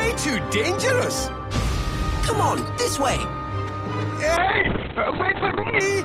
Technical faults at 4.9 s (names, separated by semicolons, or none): call bitrate drop